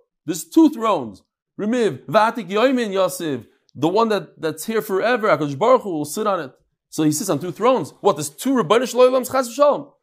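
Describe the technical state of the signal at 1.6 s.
At 1.6 s the speech signal is intact, with no dropout, clipping, glitch or other technical fault to be heard.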